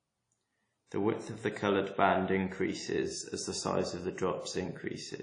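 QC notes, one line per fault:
throughout WMA compression: plainly audible transform-codec smearing, with nothing above 10.1 kHz, which fits a low bitrate near 32 kbps, likely from an early WMA encoder. Unlike a plain low-pass filter, the quantisation noise spreads across long blocks and blurs speech onsets.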